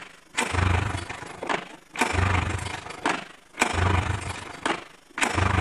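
Across the whole clip the level pulses with overlap-add ripple, a rapid flutter around 30 times a second that gives the audio a rough tremolo. The sound was split into windowed frames and rebuilt with an overlap whose windows do not add up to a steady gain, so each frame boundary leaves a dip and swell. The modulation depth is about 11 dB.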